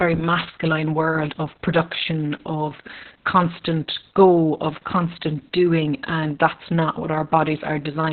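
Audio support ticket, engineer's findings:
Opus voice compression throughout, speech muffled, hoarse, faintly robotic. The SILK coder is narrowed to 4 kHz with coarse excitation, which fits a very low rate near 6 kbps. Spectrogram shows a hard ceiling at 4 kHz and smeared, blocky harmonics.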